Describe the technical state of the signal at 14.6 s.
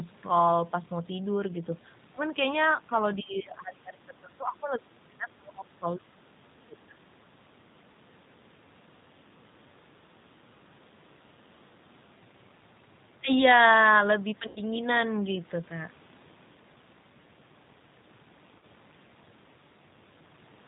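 Right at 14.6 s you're at the tail of a VoIP packet loss concealed by the speech codec, running from 14.47 to 14.60 s. About 90 ms went missing, which fits three 30 ms packets. The decoder kept extrapolating its last pitch and filter at falling gain, so the sound smears into a fading buzzy tone or coloured noise and stays weak briefly as real frames resume. Underneath is the G.729 codec at 8 kbit/s, rebuilding speech from a filter, pitch predictor and a few pulses per frame. Nothing above 4 kHz survives, and the coding damage is plainly audible as a rough, slightly synthetic edge.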